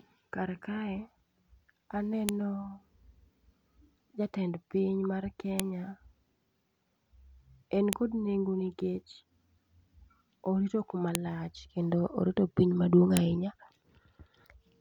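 Sharp, loud clicks at 2.29, 5.60 (after "jatend piny mar"), 7.93, 11.15 and 13.17 s are file header played as audio: joined WAV pieces kept their headers, whose bytes play as a brief burst. Unlike clipping, each snap ignores the speech level and sits at a piece boundary.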